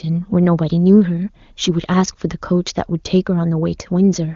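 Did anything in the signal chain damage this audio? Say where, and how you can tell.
No, no damage found.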